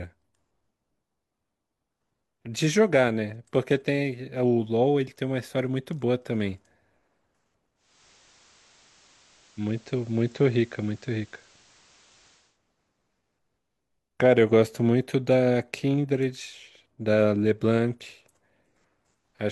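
Digital radio blending to analogue occurs from 7.75 to 12.6 s: the receiver lost its digital stream and cross-faded over 323 ms to the FM broadcast, then back. Level drops about 1 dB, and hiss appears roughly 30 dB down.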